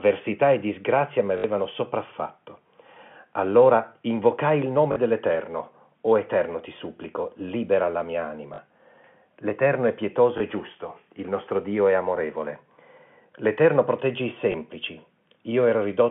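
Packet loss with last packet repeated occurs at 1.38–1.44 s, 4.92–4.96 s after "invocai il", 8.54–8.58 s after "supplico libera la mia", 10.38–10.40 s between "è pietoso" and "e giusto il nostro", and 14.52–14.54 s. Each time, the last packet of audio replays, producing a short robotic stutter where several packets repeat and a small blip where only one does, which fits 20 ms packets.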